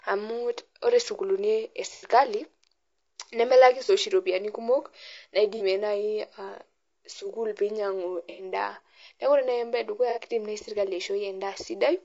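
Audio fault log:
throughout  low-delay AAC compression: The speech is rough and grainy from start to finish, with a hiss-like fill between the pitch harmonics and a thin, somewhat synthetic top band. This is likely AAC-ELD running at a rate that fits about 32 kbps. At so low a rate the bits run short, so noise fills the gaps between harmonics. The coarseness is steady across the clip, which sets it apart from the brief patches caused by packet or frame loss.
1.94–2.08 s, 3.86–3.90 s, 5.57–5.62 s, 8.30–8.44 s, 10.10–10.19 s  AAC frame loss with concealment: Five short patches sound smeared and noisy, as if the sound had briefly frozen into a hazy wash. The decoder has rebuilt the missing stretches from the last good spectrum with randomised detail. The gaps last about 90, 30, 30, 90 and 60 ms, which fits the loss of one to three frames of about 30 ms each. None of them drops to silence. 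They are local blurs and not clicks or dropouts, which is what separates them from the constant codec grain.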